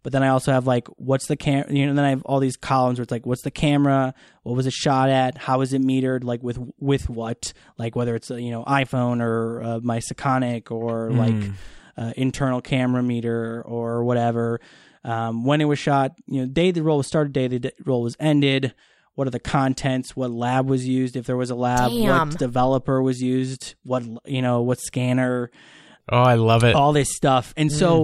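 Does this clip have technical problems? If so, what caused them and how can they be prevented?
No, nothing in this speech recording sounds like a technical problem, so there's nothing here that needs fixing or preventing.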